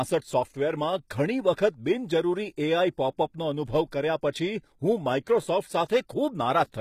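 Across the whole speech clip the treble sounds synthetic, with gritty, metallic s sounds and nothing above 14.9 kHz, which is likely HE-AAC compression at a low bitrate near 20 kbps, rebuilding upper bands from copied lower ones whose harmonics no longer align.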